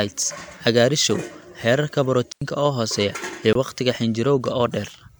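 Speech, broken twice by a block of digital silence. At 2.32 s the sound drops out for about 93 ms, to 2.42 s. That is a hole in the speech. A shorter one follows at 3.53 s, lasting about 23 ms, heard as a short hole. Each cuts in and out with no fade. The lengths fit whole 4096- and 1024-sample blocks left unfilled when the output buffer wasn't ready in time.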